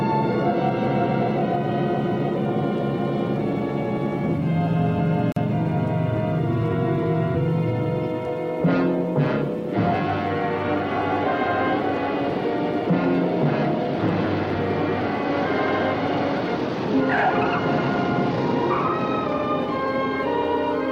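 At 5.32 s there is a gap at a join of encoded pieces, lasting 43 ms until 5.36 s. The pieces were encoded separately and joined untrimmed. Encoder start delay and final-frame padding both stayed in. The sound drops out, then resumes where it stopped.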